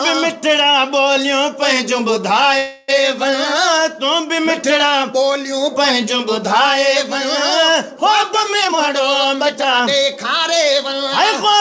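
From 2.58 to 2.90 s the sound stalls into a fading buzz lasting about 0.3 s, then resumes exactly where it stopped, with nothing lost. This is a call audio freeze, likely from delayed packets emptying the jitter buffer while the receiver stretched the last sound.

Between 8.61 and 10.13 s the audio runs hurried, at about 116% speed with unchanged pitch. This jitter buffer speed-up trims tiny pitch-period slices repeatedly, removing roughly 0.3 s in total to shrink an oversized buffer; the band stops at 8 kHz, consistent with G.722 at 64 kbps.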